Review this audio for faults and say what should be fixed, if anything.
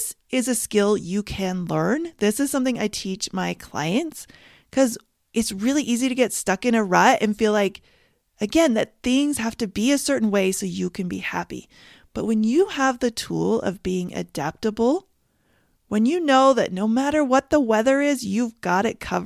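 No faults heard in this speech recording; nothing needs fixing.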